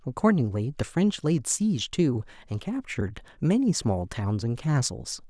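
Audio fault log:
No technical faults can be heard anywhere in this speech recording. The log has nothing further to record.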